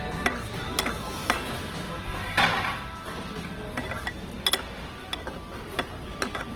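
A recording of sounds, grainy and rough throughout. Likely Opus compression at a low bitrate near 16 kbps. Bands stay filled up to about 20.2 kHz.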